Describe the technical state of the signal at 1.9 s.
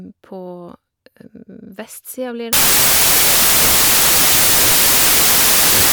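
At 1.9 s the speech signal is intact, with no audible fault at that point.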